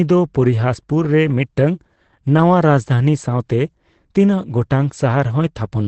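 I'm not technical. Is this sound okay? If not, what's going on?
No. Heavy Opus compression, likely in its speech mode, cuts everything above about 8.4 kHz, so the speech sounds muffled and hoarse throughout.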